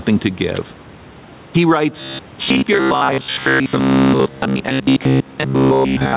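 From the start, the speech shows gain pumping. The swing is roughly 10 dB. The likely cause is input gain set far too high, with a fast limiter pulling it down on every loud syllable. Loud and soft passages end up close in level. The speech sounds squashed and breathes unevenly, over a narrow band that stops near 4 kHz.

At 2.01 s the speech turns robotic and stays that way to the end. It becomes a rigid, metallic buzz at 66.7 Hz. That pitch matches a repeated slice of about 15 ms. Most of the real audio in this stretch is skipped, so the phrasing still roughly follows the speech but the detail is gone. The likely cause is audio arriving too seldom, with the software filling the gaps by replaying the last short buffer.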